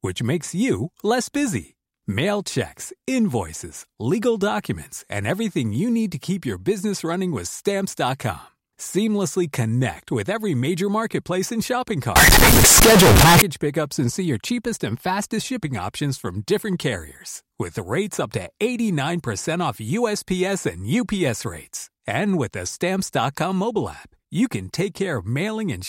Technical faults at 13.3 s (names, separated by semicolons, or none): float read as integer